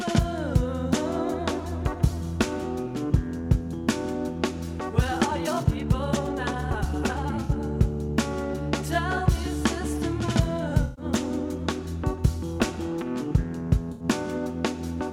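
The audio suddenly rushes ahead from 4.98 s to 7.62 s, sounding hurried at about 1.62 times its normal pace, yet its pitch never rises. That is a time-stretched section, likely from software squeezing that stretch to fit a shorter length, holding pitch steady by dropping short slices of the waveform. Separately, three brief smeared, noisy or phasey patches cut through the sound: at 7.43 to 7.51 s (64 ms, overlapping the end of the rushed part), at 10.82 to 11.04 s (about 149 ms, the longest), and at 13.92 to 14.04 s (about 85 ms). These are AAC frame loss with concealment. Blocks of encoded audio went missing, and the decoder papered over each gap by reusing the last good spectrum with randomised detail, producing that grainy wash instead of a clean dropout.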